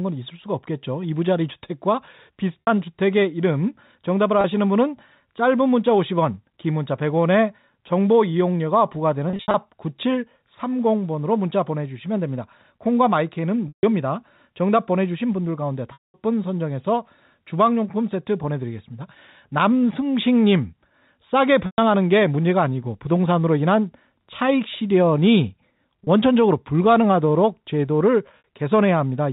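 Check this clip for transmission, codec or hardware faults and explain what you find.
The clip has packet loss with pitch repetition at eight points: 2.62 s (60 ms), 4.41 s (30 ms), 9.30 to 9.54 s (150 ms scattered), 13.68 s (150 ms), 15.93 s (210 ms), 21.66 s (120 ms), 26.04 s (30 ms) and 28.38 s (60 ms). The gaps fit 30 ms packets. The receiver repeats the last pitch period to fill each gap. Short gaps sound like a brief buzzy hold. The longer gaps fade to silence before the sound cross-fades back. All of it sits inside a telephone band with nothing above 4 kHz.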